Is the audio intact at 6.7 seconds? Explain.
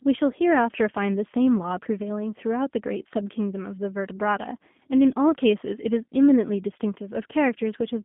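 No. At 6.7 seconds the speech is still passing through the G.729 codec, which affects the whole clip. The coder discards the original waveform and rebuilds each 10 ms frame from a vocal tract filter, a pitch predictor and a few pulses, with a rate that points to 8 kbit/s. The speech therefore sounds plainly rough and synthetic, confined to a telephone band of roughly 150 Hz to 3.5 kHz, with nothing above 3.7 kHz.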